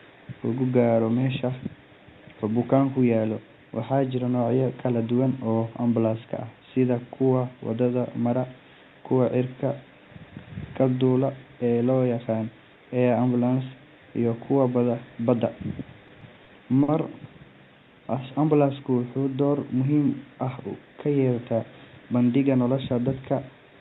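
From 16.07 to 16.90 s, late packets drained the jitter buffer four times, and the receiver filled 100 ms by extending sound; these repeated stalls make the speech stutter and drag, with gaps up to 50 ms.

Between 17.95 and 18.39 s, a jitter buffer slow-down rebuilt the reserve by repeating pitch periods, adding 46 ms, so speech runs at 92% speed with unchanged pitch and sounds drawn out.

At 20.43 to 20.64 s, a jitter buffer speed-up trimmed excess delay by cutting pitch periods, removing about 40 ms, so the speech briefly hurries to 114% speed at the same pitch.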